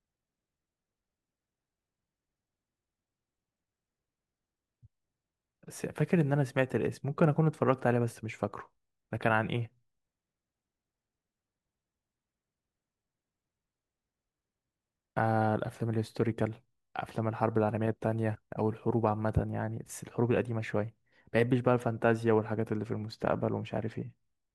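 No technical faults are audible anywhere in the recording.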